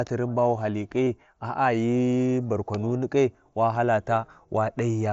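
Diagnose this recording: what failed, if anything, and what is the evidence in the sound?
The fault sits in the Bluetooth link between headset and phone: concealed Bluetooth headset packet loss. From 1.05 to 1.07 s the speech is replaced by a short, buzzy continuation held at full level. A small warble follows where real audio resumes. The receiver filled the gap by repeating the best-matching recent stretch of waveform. The hole is about 30 ms, which points to a short run of lost frames. The wideband mSBC coding carries through.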